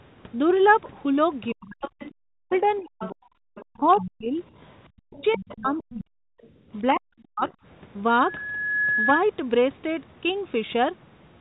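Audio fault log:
1.48–4.11 s and 4.70–5.83 s, other side's voice leaking through: the echo canceller likely left part of the far end's loudspeaker sound in the microphone signal, so a second voice rides under the main speech at roughly 15 dB below it.
1.54–4.37 s, 4.95–6.24 s and 6.90–7.43 s, speech suppressed in double talk: with both sides talking over each other, the canceller likely could not tell the local talker from the echo and pulled everything down together. The main speech sinks in pieces, by as much as about 40 dB at its deepest, adding up to roughly one and a half seconds in the first stretch, about a second in the second, and under half a second in the last.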